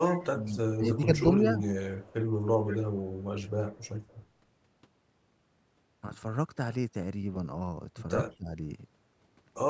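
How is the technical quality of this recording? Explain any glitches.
The recording has two recurring faults from a hands-free call: echo leak and speech suppressed in double talk.

Echo leak appears at 0.12 to 0.18 s, 1.64 to 2.15 s and 2.72 to 4.25 s. A faint copy of the speech trails it by 182 ms. It sits about 20 to 30 dB below the voice and fades over time. The likely cause is a loudspeaker echo the far end's canceller did not fully remove.

Speech suppressed in double talk occurs between 0.19 and 1.59 s, where about half a second in total dips by up to about 15 dB. It occurs again at 8.37 to 8.51 s, dropping about 25 dB. The likely cause is an echo canceller mistaking overlapping talk for echo and muting both. The call's band limit at 8 kHz is expected.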